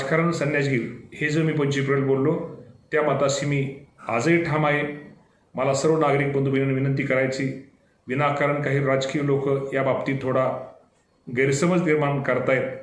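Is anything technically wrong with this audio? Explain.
No, nothing technically wrong can be heard; the signal stays intact and stable throughout, with no audible faults.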